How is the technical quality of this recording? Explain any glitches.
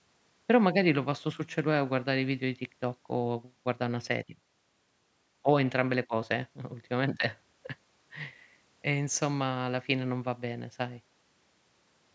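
No glitches: the speech shows only the expected traces of call microphone processing, with the lowest bass rolled off by its high-pass filter and nothing above 8 kHz.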